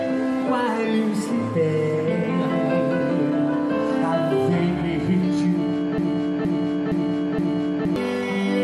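From 5.98 to 7.96 s, a broken-record loop: a 467.5 ms fragment repeats four times back to back, likely a stalled player, showing as identical tiled blocks on a spectrogram.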